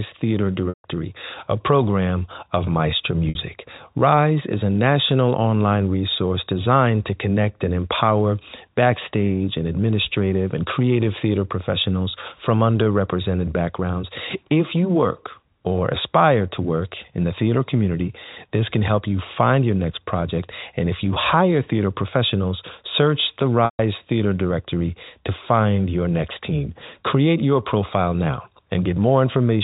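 Packet loss with pitch repetition strikes three times: at 0.69 s for 150 ms, at 3.29 s for 60 ms, and at 23.65 s for 140 ms, just after "theater professionals search the". Each time, the receiver loops the last pitch cycle to fill the gap. The short loss sounds like a brief buzzy hold, and the longer two fade toward silence before the sound cross-fades back.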